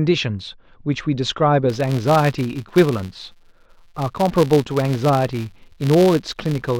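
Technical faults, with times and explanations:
1.70 s to the end: filter restarted on every block. A steady buzz at 172 Hz sits under the speech and rises and falls with its loudness. The filter drops its state at each block boundary, which fits a 256-sample block, so every block starts with a small click.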